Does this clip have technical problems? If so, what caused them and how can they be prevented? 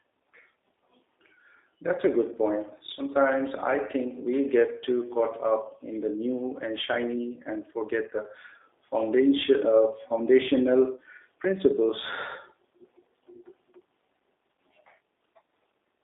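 Yes. Throughout, the speech sounds narrow, slightly rough and synthetic, with nothing below about 300 Hz or above 3.7 kHz. That points to the G.729 codec at 8 kbit/s, which rebuilds each short frame from a vocal tract filter, a pitch predictor and a few pulses rather than sending the actual waveform. Using a wideband codec such as G.722 or Opus would prevent it.

At 1.96 to 2.00 s, just before "a good", the speech briefly smears into a stretched sound that fades and recovers weakly. This is VoIP packet loss concealed by the speech codec, and the gap fits a single lost packet of about 20 ms. The decoder filled it by repeating its last pitch and filter at falling gain, and because each frame builds on the previous one, the distortion lingered a little after packets resumed. Better network quality of service, a jitter buffer or forward error correction would prevent it.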